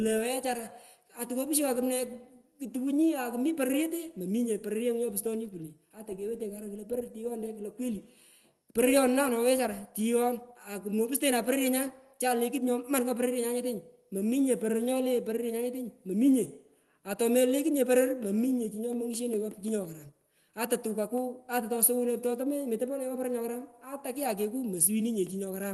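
No technical faults can be heard anywhere in the speech. The audio carries the coding texture and the 12 kHz upper limit of a working WebRTC call path, which fits the Opus codec at around 24 kbps.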